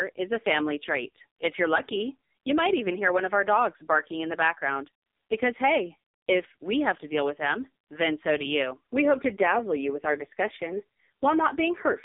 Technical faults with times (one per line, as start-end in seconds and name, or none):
0.00-12.04 AMR narrowband mobile codec